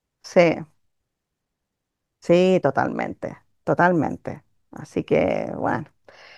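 Nothing here stands out as a technical fault; the speech runs along without any glitch worth flagging.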